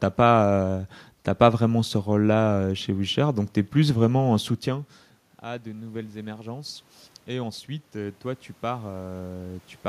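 Automatic gain rising runs from 4.65 s to 9.73 s, starting just after "es plus vraiment en". The talker moves away just before, and the input falls by about 19 dB. The gain control slowly adds about 10 dB, so the voice and room noise swell together.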